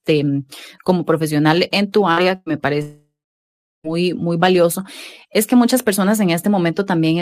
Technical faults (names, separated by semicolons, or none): burst of packet loss; long network dropout